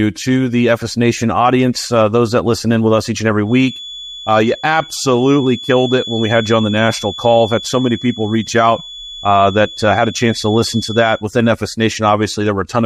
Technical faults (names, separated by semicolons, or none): feedback whistle